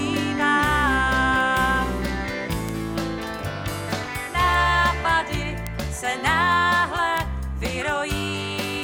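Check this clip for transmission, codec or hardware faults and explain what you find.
There are bit error spikes at 1.41, 2.69, 4.54, 5.67 and 7.18 s. Each is a single flipped bit that throws one or two samples up by a power of two before they snap back, peaking near about -18 to -6 dBFS. Each is heard as a sharp, broadband tick unrelated to the surrounding audio.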